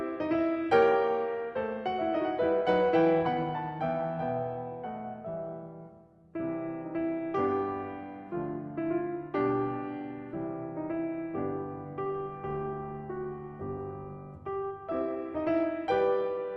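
Music carried over a WebRTC call path, with the Opus coding holding the top end near 12 kHz until a call bitrate drop at 12.05 s. From there to 15.75 s the encoder works with far fewer bits and quantises the music more coarsely, so the texture turns rough and watery and the highs sound duller. The degradation holds steady for about 3.6 s before clearing, which fits a fall from 32 kbps to roughly 18 kbps.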